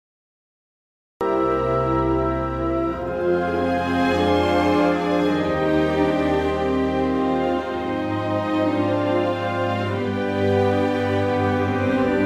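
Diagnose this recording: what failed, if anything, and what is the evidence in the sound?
The first 1.21 s are dead digital silence, then the sound appears abruptly at 1.21 s already mid-event, with no attack or fade-in. This is a cut-off start at the capture or storage stage: recording began late, so the opening of the sound was never written.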